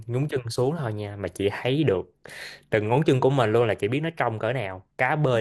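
Throughout the speech, the sound is dull and gurgling, likely from MP2 compression at a low rate around 80 kbps; a spectrogram shows upper sub-bands flickering on and off.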